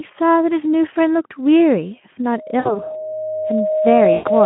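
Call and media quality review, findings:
Buzzy tone or coloured noise fading out at 2.59–2.95 s and 4.13–4.31 s. VoIP packet loss concealed by the speech codec: 60 ms, then 120 ms, extrapolated from the last pitch with decaying gain.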